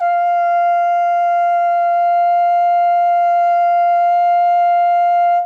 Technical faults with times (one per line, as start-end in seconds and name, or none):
none